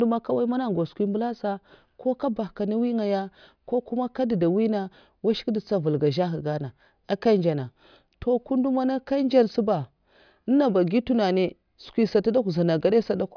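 No technical faults are audible.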